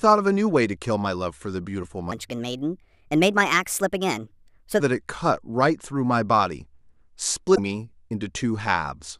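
From 2.12 to 4.80 s the speech runs as a section at the wrong speed. It plays 1.31 times too fast, so it sounds hurried and lifted by roughly five semitones, most likely because that stretch was fitted to the wrong clock. On a spectrogram the harmonics and formant bands in that span sit visibly higher and more widely spaced, and syllables are compressed in time. The waveform shows tighter, shorter bursts that snap back to normal pacing at both edges.

At 7.54 to 7.59 s the sound jumps ahead and a brief glitch replaces the audio, which fits a broken MP3 bit reservoir. A frame that borrows bits from earlier frames likely found another frame's bytes after frames were cut. The glitch spans under two frames of about 26 ms each. A spectrogram shows a short smear of broadband or oddly tonal energy with an abrupt discontinuity, and the waveform shows a jagged splice where the contour fails to line up.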